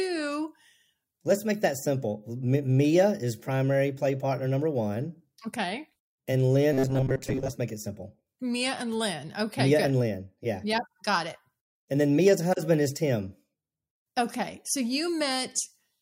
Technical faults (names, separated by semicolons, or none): robotic sound from repeated short buffers